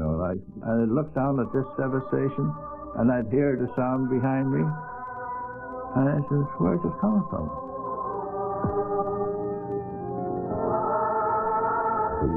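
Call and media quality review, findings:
No findings in the call and media quality review.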